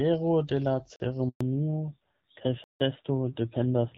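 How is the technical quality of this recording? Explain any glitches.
The recording has three kinds of trouble: two hard dropouts, a handover gap, and a drop in bandwidth that lasts to the end. Up to about 1.4 s you're hearing wideband HD Voice with only light coding wear, which fits AMR-WB at 12.65 kbit/s.

At 0.96 s and again at 2.64 s there's a block of digital silence. The first lasts 40 ms and the second 160 ms. In each case a run of samples came out as silence, most likely because the output buffer wasn't filled in time. There's no fade in or out, so the sound cuts off and back abruptly. The short one sounds like a tick with a tiny hole in it, and the long one is a clear little gap in the audio.

From 1.29 to 1.41 s there's a handover gap of about 120 ms. That's the phone shifting the call to another network while no speech frames are coming through. This one is different from the zero blocks: the sound dies away over a few tens of milliseconds instead of snapping off, then stays silent until the new link comes up. 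Whatever was said in that window is gone.

Right as the call comes back at 1.41 s, there's a fallback to narrowband that lasts to the end of the clip. The call dropped from the wideband codec to an older narrowband one, and the sound fits AMR-NB at around 7.4 kbit/s. Nothing above 4 kHz survives, so the speech loses its air and crispness and comes across duller and a bit rougher, the classic old phone-line sound.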